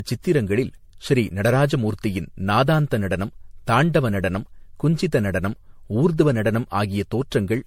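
Speech throughout with generation loss: a swirly, smeared, hollow sound with blurred consonant attacks and nothing above 16.5 kHz. Unlike a single low-bitrate MP3, the damage exceeds what 64 kbit/s alone explains, likely from roughly seven successive re-encodes compounding artefacts.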